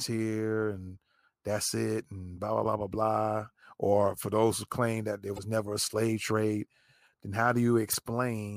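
Damaged data in a compressed stream at 2.60 s after "that's it and blah", 5.35 s between "who claim that there" and "never a slave trade", and 7.91 s after "a slave trade then". Corrupted frames throw the decoder out of sync, leaving 0.04 s glitches while it hunts for the next frame.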